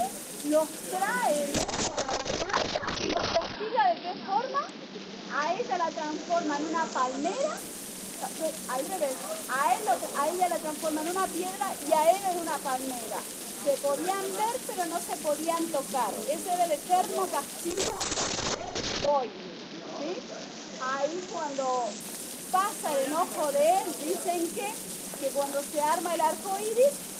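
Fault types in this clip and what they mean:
Call bitrate drop: the call's bandwidth estimate sagged, so the encoder got squeezed onto far fewer bits and started coding coarsely. You hear it twice, from 1.55 to 7.63 s and again from 17.71 to 22.06 s. Each time the top end gets chopped, down to about 6 kHz the first time and 8 kHz the second. The sound goes dull and watery, which fits a fall from around 48 kbps to under 10 kbps, before it opens back up.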